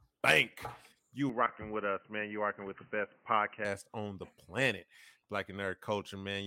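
At 1.29 s the sound abruptly turns dull and boxy, with nothing above 3 kHz and a faint new noise floor about 40 dB down, then clears again at 3.65 s just before "on the planet". The level doesn't change and there's no gap at either switch, which sets this apart from a dropout or an EQ fault. The likely cause is an input switched to a poorer device.

From 1.46 to 1.49 s, inside the dull stretch, a brief glitch marks damaged data in a compressed stream: the decoder misread corrupt frames and resynced. Unlike the device switch, it lasts only milliseconds.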